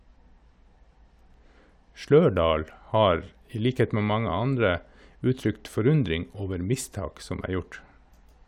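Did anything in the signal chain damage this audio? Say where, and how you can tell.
Yes: sample clock jitter at the converter, 0.0 to 5.5 s. The unsteady clock adds hiss that tracks loud, bright speech, roughly 40 dB below signal, then disappears in pauses.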